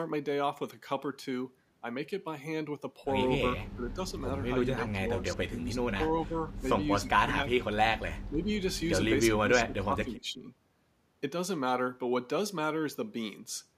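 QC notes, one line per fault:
0.16–13.52 s, clock slip clicks: faint ticks at a steady spacing of about 0.4 s, roughly 40 in all, each a single sample dropped or repeated. Likely two unsynchronised clocks drifting apart by about 50 ppm, slipping one sample each time the error accumulates.
3.75–3.97, 4.76–5.81, 6.25–6.40, 6.95–7.76, 8.30–8.49 and 9.41–10.49 s, speech suppressed in double talk: the voice dips by about 10–20 dB, and by about 35 dB at 6.95–7.76 s, where it nearly drops out. The likely cause is an echo canceller treating overlapping far-end talk as echo and attenuating both.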